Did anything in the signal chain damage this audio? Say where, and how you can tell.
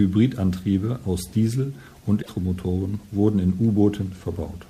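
Yes. Damaged data in a compressed stream, from 2.18 to 2.29 s, about 0.11 s, points to the codec stage, where the encoded speech was stored or carried. Over that span the speech is broken by a short decoding glitch. Corrupted bytes in the bitstream made the decoder misread those frames, lose sync and skip forward to the next valid frame header.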